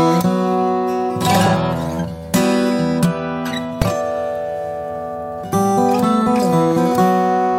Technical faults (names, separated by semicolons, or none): invalid numbers at full scale